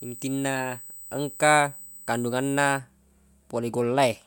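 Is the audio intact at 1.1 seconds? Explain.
No. At 1.1 seconds the speech carries USB whine, running from the start to 2.79 s. A USB bus pulls current in 125-microsecond microframes, and that leaks through power or ground. It sounds as a fixed 8 kHz tone, strongest at 16 kHz, roughly 20 dB below the speech.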